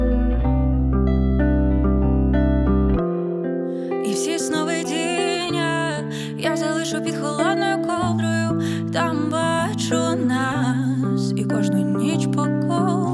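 Nothing in the audio stood out as a technical fault on listening.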